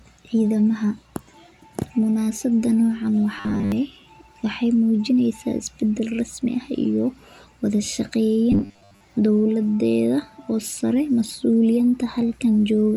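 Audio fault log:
3.38–3.72 s and 8.52–9.04 s: robotic sound from repeated short buffers, a rigid metallic 100 Hz buzz, likely from a 10 ms fragment looping while most real audio is skipped.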